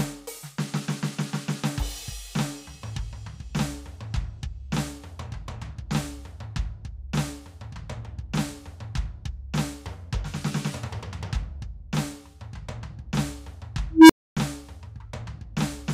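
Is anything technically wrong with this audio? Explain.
Yes. At 13.91 s the music gives way to an unstable filter: a low tone around 300 Hz swells over about 0.18 s as a recursive filter's feedback runs away, clips, then overflows into roughly 0.27 s of silence, ending near 14.37 s.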